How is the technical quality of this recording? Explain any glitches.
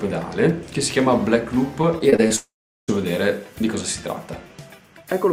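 The recording has two network faults close together in its middle section.

Repeated packet loss (robotic sound) runs from 1.81 to 2.32 s. Five short holes, the longest 22 ms, were each patched by extending the preceding sound, covering about 17% of that stretch. The result is choppy, with small pieces missing.

A long network dropout follows from 2.36 to 2.90 s. The sound continues briefly and then gives way to about 380 ms of silence, which points to a likely cause of the stream stopping and the receiver filling the gap. The audio resumes without the missing half-second.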